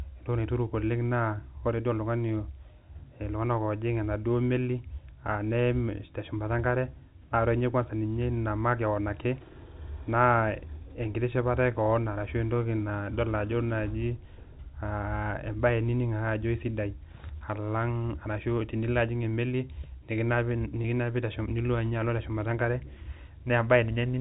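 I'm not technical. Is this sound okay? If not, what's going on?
No, there is one brief flaw. At 20.82 s a tiny piece of the speech, about 20 ms, never arrived, which fits a single lost packet. The receiver covered it with packet loss with pitch repetition, replaying the last sliver of voice to fill the gap. Instead of a click or a moment of silence, you hear the sound held for an instant with a faint buzz before the speech carries on. The telephone-style sound comes from G.711 telephone coding.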